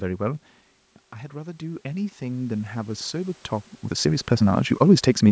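A speech clip. From 1.33 to 3.47 s the voice and the room noise behind it swell together, rising by about 9 dB over two seconds. That is automatic gain rising: the level reaching the microphone dropped by about 9 dB, and the gain control slowly pushed its gain up to compensate. From 3.58 s to the end the pace abruptly turns rushed, running about 1.71 times faster with the pitch unchanged. This is likely a time-stretched section, squeezed to fit a length by dropping short pieces of the audio, around where the talker also shifts position near the microphone.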